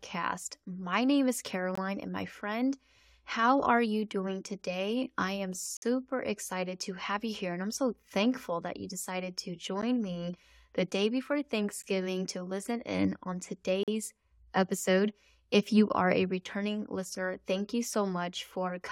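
Gaps between stream segments at 1.75–1.78, 5.77–5.82 (after "doing today I am"), 9.82, 11.82–11.84 and 13.83–13.88 s leave hard-edged silences of 11 to 53 ms, recurring on a 2-second segment boundary where timestamps fall short. Unlike a dropout, nothing is lost; speech resumes exactly where it stopped.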